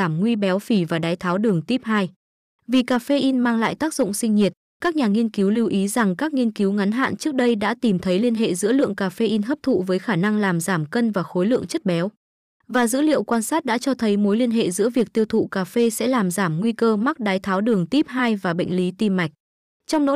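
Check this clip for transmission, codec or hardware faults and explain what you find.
There's hard clipping throughout this speech: a stage was overdriven by about 4 dB, flattening the loudest peaks, only a small fraction of samples, so you hear crackle on peaks.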